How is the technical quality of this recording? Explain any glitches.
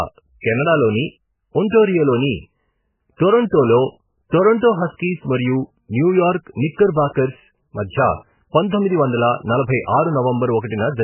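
Pretty rough, honestly: the whole recording is badly degraded, start to finish.

From beginning to end the speech sounds smeared and watery, and nothing comes through above about 3 kHz, so it's dull and muffled. That's very likely heavy MP3 compression, starved enough to point to something around 8 kbps. With so few bits, the encoder throws away the treble at a fixed cutoff and keeps zeroing quieter frequency lines. Those lines flicker in and out frame to frame, which gives the swirly, underwater texture and softens the consonant attacks.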